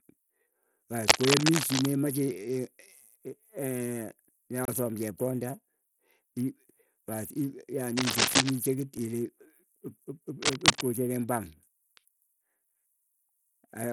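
Right from the start the whole clip carries what sounds like Bluetooth SBC compression. The top end of the speech is thin and keeps flickering in and out, and there's a gritty edge riding on everything. That's what you'd expect when the upper sub-bands are starved of bits and the rest get quantised coarsely, and the amount of damage points to a low bitpool, somewhere around 80 kbps. It's likely an SBC link doing that.

From 1.08 to 1.91 s there's a burst of cable scratch noise: dense, uneven crackle sitting a few dB above the speech. It comes back from 7.96 to 8.51 s and again from 10.42 to 10.84 s, at about the same level each time. That rough, rustling character is most likely a worn cable or connector being moved, with its contact resistance jumping around.

At 4.65 s the audio drops into a block of digital silence lasting about 28 ms. It cuts out and back with no fade, leaving a short hole. 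A much shorter one hits at 8.98 s, only about 5 ms long, and comes across as a single tick. Both fit the output buffer not being filled in time and zeros going out instead.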